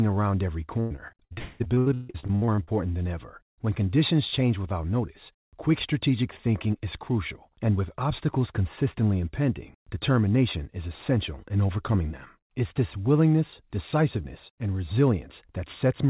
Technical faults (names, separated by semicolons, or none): repeated packet loss (robotic sound); long network dropout